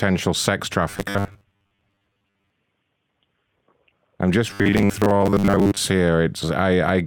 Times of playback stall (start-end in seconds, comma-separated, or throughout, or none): none